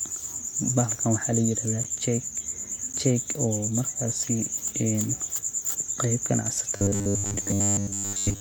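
It's a speech recording with two kinds of trouble. Right after "waxa layirahda", at about 1.84 s, there's a block of digital silence: the signal drops straight to silence for roughly 11.6 ms and snaps back with no fade, so you hear a little tick rather than a real gap. The same thing happens again at 2.93 s. Both holes are identical in length, which fits a 512-sample buffer that the program didn't fill in time. From 6.76 s through the end, the voice goes hard and metallic with a fixed 100 Hz buzz sitting on it, while the rough shape of the words still comes through. That's robotic sound from repeated short buffers. The likely cause is that new audio was arriving too slowly, so the software kept replaying the last 10 ms chunk and skipped the real audio for most of that stretch. The constant repeat length is what forces that steady pitch.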